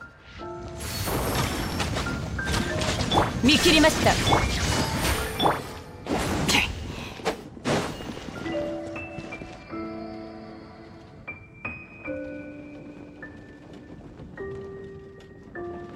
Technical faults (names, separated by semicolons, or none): none